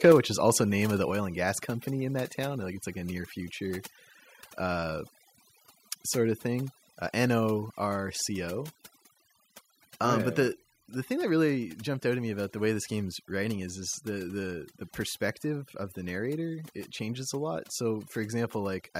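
Over-aggressive noise removal runs through the whole speech clip: the suppressor is clamping bands near its noise estimate hard, so the background sits in near silence with little twinkling specks, and quieter parts of the voice get eaten.

Right at the top, from 0.04 to 0.15 s, just before "which is also name", there's a harsh, crackly edge on the peaks. That's likely microphone overload: the input is pushing about 4 dB past the converter's limit, flat-topping roughly a tenth of the samples.

Then the microphone volume steps down three times, voice and background dropping together. At 0.12 s it falls about 4 dB, right inside that clipped burst. At 1.11 s, between "also name of the" and "and gas company in", it drops about 3 dB, and at 10.53 s about 2 dB. That's likely the call software lowering the input gain after finding the microphone too loud.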